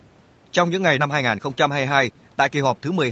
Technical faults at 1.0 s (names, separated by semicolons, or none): skip ahead